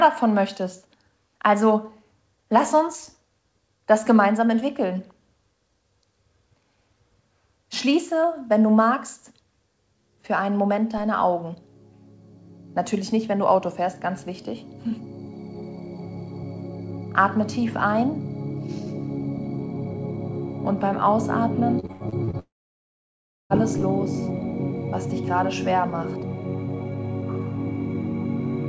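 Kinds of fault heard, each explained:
Repeated packet loss (robotic sound): From 21.80 to 22.36 s the sound turns choppy. Six short holes appear, the longest 86 ms. Each is patched by stretching the previous sound, so about 42% of that half-second is filled-in sound, not real audio.
Long network dropout: Right after, from 22.39 to 23.53 s, the audio stops for about 1.1 s. A brief continuation of the last sound fades, then roughly a second of silence follows. This is likely a network dropout, and the missing audio never returns.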